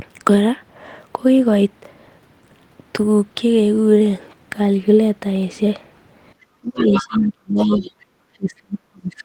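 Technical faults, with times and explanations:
6.57–7.9 s, speech suppressed in double talk: The echo canceller likely mistook both sides talking at once for echo and clamped the microphone path, so the talker's speech dips for roughly a second in total, falling as far as about 30 dB.
6.81–7.28 s, other side's voice leaking through: The canceller likely failed to subtract all of the loudspeaker signal from the microphone, so a second voice sits around 10 dB below the talker.
7.71–7.91 s, other side's voice leaking through: Residual loudspeaker echo, likely left behind by the same incomplete cancellation, surfaces again as a brief scrap of the far voice, quieter this time at roughly 15 dB under the talker.
8.36 s to the end, speech suppressed in double talk: Suppression likely triggered by overlapping talk cuts the talker down again, now by as much as about 35 dB.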